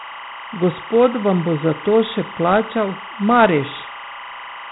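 Timecode bleed runs through the whole of this speech clip: a linear timecode signal has leaked from a neighbouring track or cable into the recording. Its square wave flips between two pitches, near 1 and 2 kHz, at a 25 frames per second rate, so a steady chirping warble sits behind the voice, roughly 15 dB below it. Dialogic VOX ADPCM damage is also present from start to finish. The audio has passed through 4-bit OKI-style ADPCM coding, which fits a 32 kbps stream at 8,000 samples a second. Nothing is left above 3.8 kHz, and the coarse step-size tracking leaves a plainly audible gritty hiss that rides along with the speech.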